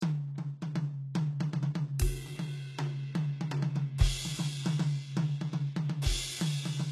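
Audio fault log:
Throughout, HE-AAC compression: the music's treble sounds gritty and metallic, and nothing comes through above 12.3 kHz. That's likely from low-bitrate spectral band replication, maybe around 16 kbps, copying lower bands upward so the harmonics up top don't line up.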